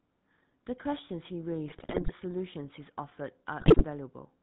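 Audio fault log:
throughout: GSM full-rate codec. The speech has a buzzy, gravelly roughness and sounds dull, with nothing above 4 kHz. The vocal-tract model is driven by a coarse, regularly spaced pulse excitation, and that plainly audible grain fits the 13 kbit/s full-rate codec.
1.68–2.12 s and 3.60–3.85 s: GSM bit errors. The speech breaks into squawks, pops and gargling. Corrupted filter, pitch and gain values reach the decoder, warping the spectrum and spiking the level frame by frame. The second, shorter burst sounds harsher, which points to a higher error rate.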